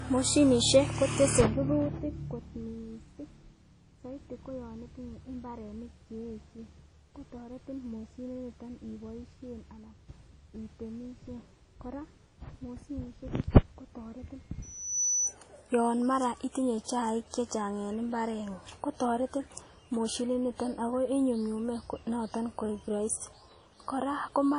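WMA compression, likely the cause of the damage heard throughout, gives plainly audible ringing and washy smearing around the speech, with nothing above 10.1 kHz. A transform codec spreads its quantisation noise across long blocks and drops weak detail, which fits a low bitrate around 32 kbps.

A loudspeaker feedback squeal runs from 14.62 to 15.36 s. A microphone picks up the loudspeaker it feeds, and the loop gain exceeds one at a single frequency. A 6 kHz tone swells in under half a second to about 5 dB above the speech, then stops.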